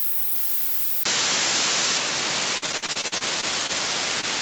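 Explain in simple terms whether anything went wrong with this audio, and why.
At 1.03 s the sound briefly drops out, then turns duller, slightly quieter and gains faint background noise, with nothing above 7.6 kHz: input switched to a poorer device, likely a different microphone. From 2.57 to 3.71 s, repeated packet loss gives a choppy, robotic sound, with gaps up to 48 ms patched by stretching earlier sound, about 28% of that stretch. From 4.21 to 4.25 s, a short concealed packet loss leaves a brief smear where roughly 20 ms of missing audio was filled in.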